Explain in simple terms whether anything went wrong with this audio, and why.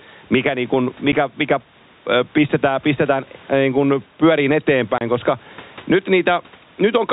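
Yes, two things went wrong. First, there's gain pumping all the way through. The likely cause is the input gain set far too high, with a fast limiter clamping down on every loud moment. That squashes loud and soft parts together.

Second, there's packet loss filled with silence. At 1.12 s the sound drops out for a blink of about 10 ms, and from 4.98 to 5.01 s there's a longer 30 ms hole. Both gaps have abrupt edges as the sound cuts off and comes back. Those lengths fit lost chunks of 10 ms each, one and then three in a row, which the receiver simply replaced with nothing.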